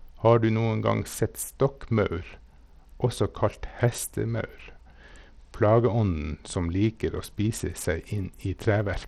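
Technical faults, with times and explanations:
Throughout, Bluetooth SBC compression. The speech sounds gritty and thin across the clip, and the damage is plainly audible. The highest frequencies drop out or flicker, and a rough, grainy noise rides on the sound. This is likely the SBC Bluetooth codec running with a small bit pool. The weak upper sub-bands get few or no bits, and the rest are quantised coarsely. The sound points to a low bitrate, about 80 kbps.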